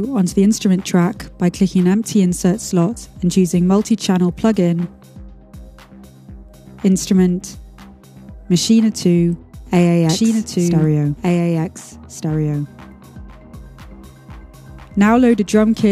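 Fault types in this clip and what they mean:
Doubled audio track: from about 10.09 s to the end, a second copy of the same sound comes in trailing the original by roughly a second and a half, a few dB quieter and full-band, with no decay or room colour on it. It kicks in abruptly rather than fading up. The likely cause is the signal being picked up a second time through a slower path, or an edit that left two copies out of step.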